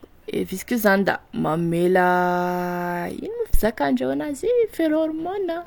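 At about 3.54 s there's a phantom power thump, a deep low thud lasting until around 3.62 s. Someone switched the supply on a live input, and that voltage step pushed through the coupling capacitors, dying away quickly with a decay of roughly 17 ms.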